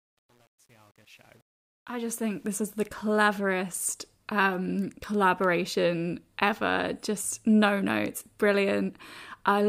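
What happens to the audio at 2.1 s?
Truncation distortion on the fade-in runs from 0.0 to 2.49 s, and 2.1 s is where its worst stretch ends. The fade keeps too few bits, which fits a 9-bit stage, with no dither, so quiet speech becomes coarse square steps and sounds gritty.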